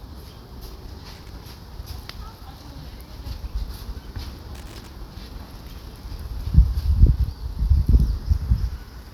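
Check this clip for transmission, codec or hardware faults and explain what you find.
There is one hardware fault, loose connector crackle, in two bursts: 1.14 to 1.29 s and 4.55 to 4.87 s. A worn or dirty contact is making and breaking as it shifts. This chops the signal. Each burst sounds like irregular scratchy crackle.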